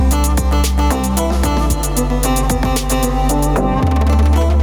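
Gain pumping runs through the whole clip, with the level swinging by around 5 dB. The likely cause is gain set far too high at the input, with a fast limiter or compressor clamping down on each peak and releasing in between. Loud and soft parts sit close in level and sound squashed. The waveform shows a flattened, even envelope.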